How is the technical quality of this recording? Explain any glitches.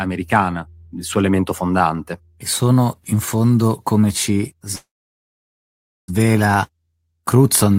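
The recording has one clear glitch, a call audio freeze. At 4.75 s, right after "in fondo come ci", the speech stops for about 1.3 s until 6.10 s. Packets were likely held up and the jitter buffer ran empty. The last sound trails off briefly, then about 1.2 s of silence follows, showing as a flat waveform and a blank spectrogram band. The speech resumes where it stopped, delayed rather than missing anything.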